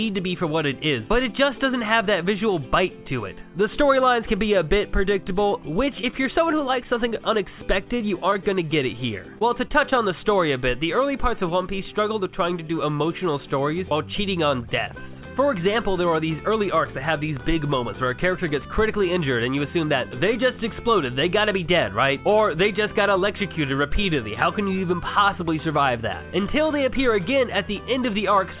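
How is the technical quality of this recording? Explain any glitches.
The recording has packet-loss glitches concentrated between about 5.3 and 10 s. The audio is band-limited, with nothing above 4 kHz, which fits a G.711 A-law call path at 64 kbps.

Scattered short gaps run from 5.29 to 7.16 s. Around ten brief holes, none longer than roughly 15 ms, appear where packets were lost or arrived late. The receiver bridged each hole by extending the preceding audio, so about 4% of that stretch is filled in. These gaps are heard as isolated ticks or small smears. On a spectrogram they show as thin vertical seams where the texture repeats or freezes for an instant. In the waveform they appear as short, slightly repetitive patches.

Repeated packet loss, heard as a robotic sound, occurs at 7.99–8.57 s and again at 9.39–9.98 s. The first burst has five gaps, the longest 10 ms, with 9% of the span concealed. 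The second has four gaps, the longest 23 ms, with 10% concealed. Because the holes follow each other so closely, the patched-in repeats take on a choppy sound with pieces missing. A spectrogram shows tight clusters of smeared, striped columns. The waveform shows periodic repeated cycles broken by discontinuities.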